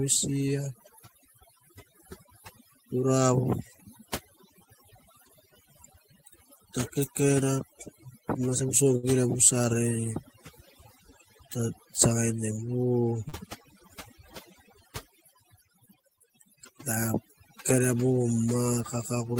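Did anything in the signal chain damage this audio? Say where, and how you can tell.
Yes. Overdone noise removal runs throughout, at the call-processing stage. The suppressor cuts bands near its noise estimate, leaving twinkling, near-silent gaps.

Short stalls from a late packet occur at 8.97–9.05 s and 13.28–13.34 s, on the network side. The jitter buffer ran dry and the last sound was held about 57 ms and 40 ms before resuming.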